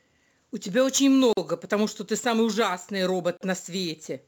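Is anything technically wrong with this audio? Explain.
Yes. Two faults are audible in this speech.

Sample clock jitter runs throughout. Unstable converter timing makes slope-dependent sampling errors, roughly 25 dB below the signal: a hiss on loud, bright passages that disappears in pauses.

A gap at a join of encoded pieces appears at 1.33 to 1.37 s (43 ms) and 3.37 to 3.41 s (38 ms), every 2.0 s. Untrimmed encoder delay and padding leave short gaps with smeared edges before the sound resumes where it stopped.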